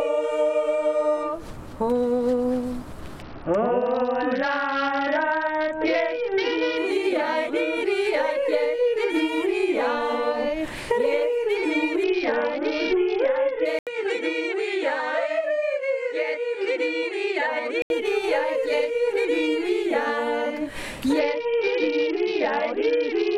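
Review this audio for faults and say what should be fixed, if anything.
Three stretches suffer a Bluetooth SBC bit pool drop: 3.22 to 6.77 s, 12.04 to 13.65 s, and 21.19 s to the end. In each, the treble goes dull and a gritty noise rises. The link was congested, so the encoder cut its bit budget. The sound points to a bit pool falling from 31 to 7, about 61 kbps. The top sub-bands lose their bits, and the rest are coarsely quantised. Keep the link clear of interference and distance, or use a wired path.

From 13.79 to 17.90 s, the sound turns narrower and duller. Nothing remains above 9.1 kHz. An 80 ms silence marks the start, and a new noise floor appears roughly 50 dB below the signal. The level stays about the same. This is likely an input switched to a poorer device, such as another microphone or a headset's call profile. Lock the recording input so the system cannot change it mid-take.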